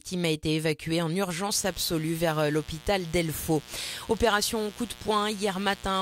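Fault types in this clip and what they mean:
mains buzz: raspy 60 Hz buzz from about 1.52 s to the end, harmonics climbing into the kilohertz range; spectrogram shows evenly spaced horizontal lines, level about 20 dB below the signal.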